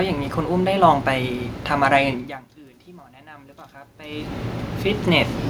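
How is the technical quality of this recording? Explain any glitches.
There is one glitch, an automatic gain rising event. From 3.23 to 4.52 s, the level swells by about 4 dB. The input had dropped by about 24 dB, so the automatic gain control pushed its gain up gradually. Voice and room noise rise together over that stretch. The talker also shifts position around 2 s and 4 s, which changes the voice level at the microphone, but that comes from movement and is not a system fault.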